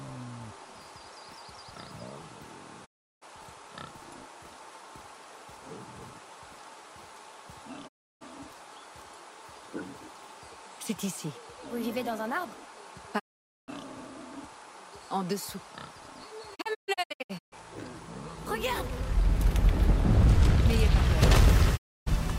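Digital broadcast dropouts occur at 2.84–3.24 s, 7.87–8.23 s, 13.18–13.70 s, 16.54–17.54 s and 21.76–22.08 s. Each time, the receiver lost good frames and muted, fading to silence over 20 ms. The fourth dropout breaks into scattered holes, the longest 128 ms. The missing sound is gone.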